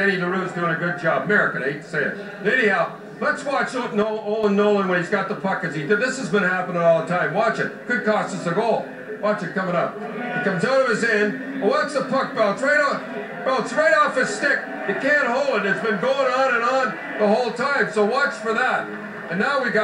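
One channel drops out from 4.02 to 4.44 s. The sound abruptly falls by about 6 dB for those 0.41 s and then snaps back. This is likely one side of the stereo pair going silent, which halves the shared signal once the channels are summed to mono.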